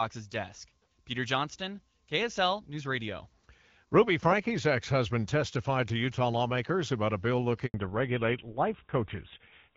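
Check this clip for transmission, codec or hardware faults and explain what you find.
Two faults appear near the end of this speech clip, one directly after the other: a handover gap and a fallback to narrowband.

The handover gap runs from 7.66 to 7.74 s, a silence of 80 ms. When a call is moved between networks, no speech frames are delivered while the new link is set up. The speech fades out within a few tens of milliseconds and drops to silence. Whatever was said during those 80 ms is lost and cannot be recovered.

The fallback to narrowband starts at 7.74 s and lasts to the end of the clip. After the handover, the call continues on an older narrowband codec, and the sound is consistent with GSM full rate at about 13 kbit/s. That codec carries nothing above 4 kHz, so high-frequency detail is missing from that point on. The speech sounds duller and rougher than before the gap. Up to that point, the HD Voice wideband coding shows only light codec damage, which fits AMR-WB at 12.65 kbit/s.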